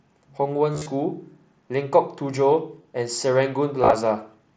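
At 0.73 to 0.86 s, 2.82 to 2.84 s and 3.82 to 3.93 s the speech has concealed Bluetooth headset packet loss: missing headset packets were filled by repeating the best-matching recent stretch of waveform. About 98 ms is patched across the first 135 ms, in runs up to 30 ms, and about 60 ms across the last, in runs up to 22.5 ms. These runs give a buzzy tone held at full level. The waveform shows copied identical cycles, and the spectrogram shows frozen, evenly spaced harmonics, with a brief warble where real audio resumes.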